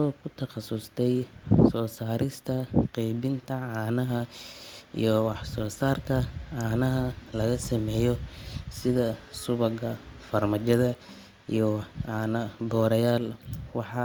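No technical faults can be heard anywhere in the recording.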